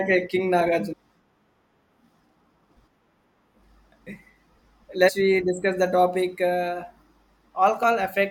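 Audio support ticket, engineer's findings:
Damaged data in a compressed stream: short glitches at 0.92, 2.75, 5.08 (just before "we discuss the topic") and 7.83 s. Decoder misreading corrupt frames, losing sync and hunting for the next header. Spectrogram: brief broadband vertical smears. Waveform: sharp discontinuities.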